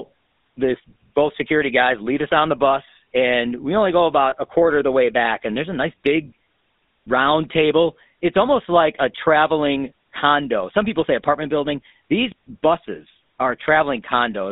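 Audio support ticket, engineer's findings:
GSM full-rate codec throughout: buzzy, gravelly speech, band roughly 200 Hz to 3.7 kHz, consistent with 13 kbps GSM. Pulse-driven vocal-tract model discards much excitation detail, so the roughness is plainly audible.

Lost GSM frame at 4.3 s: brief metallic ring about 20 ms, fits a single dropped frame. Decoder repeated the last good frame's settings, so the gap gets patched with a rough held tone.

Phantom power thump at 12.32 s: deep low thud dying away in about 93 ms, tail out to 12.73 s. Supply switched on a live input, step pushed through coupling caps. Check phantom switching, mute first.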